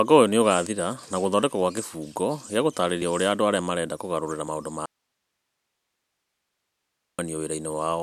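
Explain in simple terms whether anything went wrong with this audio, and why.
Two kinds of fault occur in this speech recording.

At 0.66 s, 3.02 s and 4.48 s the speech jumps forward abruptly, with roughly 20 ms missing each time and no silence in between. This is likely a dropped buffer (overrun): the recording software fell behind, the sound card overwrote a small block of audio before it was saved, and the audio on either side of the lost block was joined end to end.

From 4.86 s to 7.19 s, about 2.3 seconds, the speech cuts out suddenly and only hiss remains, then it returns just as abruptly. This is an audio dropout to a faint residue. The likely cause is that the speech signal was lost partway along the chain while the later stages kept running, so their background hiss was still recorded.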